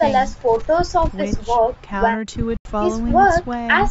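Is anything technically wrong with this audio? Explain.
Yes, the speech has two separate interruptions.

From 0.53 to 1.10 s there is an intermittent contact fault. A loose plug or cable connection opens and the signal path breaks for about 408 ms. Crackle marks both edges where the contact scrapes open and shut, and only faint hiss remains in between. On a waveform the speech collapses to a thin noise floor, framed by sharp spiky bursts. On a spectrogram those bursts are vertical broadband streaks bracketing a nearly empty band.

From 2.57 to 2.65 s there is a gap of about 81 ms that is likely a Bluetooth dropout. Audio packets seem to have arrived too late to play and were discarded, which fits a handful of lost packets. The output falls completely silent with no crackle. The speech then resumes further along, as if it had kept playing through the hole. A waveform shows a flat silent gap. 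A spectrogram shows a clean vertical blank column running up to the 8 kHz ceiling set by the call's microphone processing.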